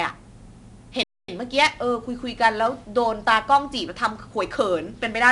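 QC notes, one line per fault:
Throughout: 4-bit ADPCM compression. Coarse 4-bit prediction steps add gritty hiss that follows the speech level. Nothing sounds above 10.7 kHz, which fits a 22 kHz sample rate.
1.03 to 1.29 s: playback stall. The player likely ran out of data, so the speech cuts to silence for 250 ms before carrying on.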